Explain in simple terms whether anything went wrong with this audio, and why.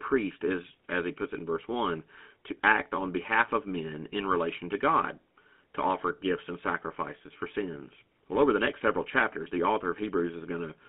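The whole clip has been through the GSM full-rate codec, an early mobile-phone speech coder. It keeps only sound between about 200 Hz and 3.5 kHz, so the speech sounds thin and muffled. Its crude pulse-driven voice model adds a buzzy, gravelly roughness from start to finish.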